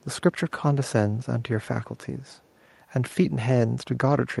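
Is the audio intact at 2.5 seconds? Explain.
No. From 2.22 to 2.6 s there is an echo leak: a very faint, delayed copy of the speech trails the original by about 344 ms. The likely cause is a far-end loudspeaker whose echo canceller let some of its microphone pickup return down the line. Room reverberation would be a smear that begins right away. This sounds instead like a distinct second copy arriving roughly a third of a second late.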